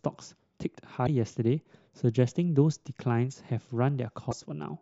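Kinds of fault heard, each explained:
Damaged data in a compressed stream: corrupted bytes in the encoded speech make the decoder misread frames and lose sync until it finds the next valid frame header. The result is two short glitches of about 60 ms each, at 1.03 to 1.09 s and 4.27 to 4.33 s. On a spectrogram each appears as a narrow vertical disruption cutting across the speech harmonics. The waveform shows a brief, abrupt-edged disturbance.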